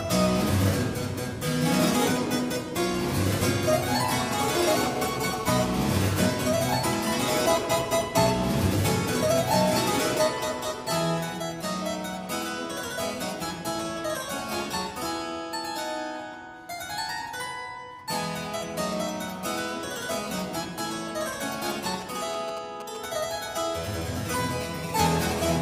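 From 4.53 to 6.44 s a hard, raspy 217 Hz buzz, about 13 dB below the signal, is GSM phone buzz: a nearby phone mid-call, its transmit bursts rectified by the audio circuitry.

From 21.86 to 23.06 s galloping dit-dit-dit ticks and short buzzes, roughly 15 dB down, are GSM signalling bursts, brief radio bursts rectified into the audio.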